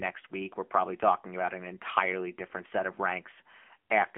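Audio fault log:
throughout: AMR narrowband mobile codec. Speech is confined to 200 Hz to 3.4 kHz, with nothing above 3.6 kHz. A plainly buzzy, synthetic texture from sparse-pulse vocal-tract modelling fits a low mode near 8 kbps.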